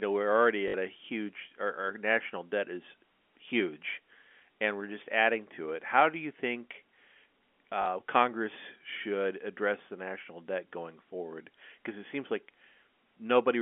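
Packet loss with last packet repeated: at 0.68 to 0.74 s and 7.82 to 7.86 s, the receiver replayed its last packet over missing audio, producing brief robotic stutters.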